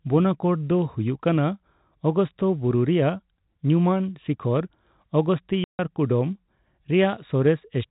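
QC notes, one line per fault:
5.64–5.79 s, packet loss filled with silence: the speech drops out abruptly for 150 ms, with hard edges on both sides. Lost packets were replaced by digital silence, and the gap's length fits a run of five 30 ms packets.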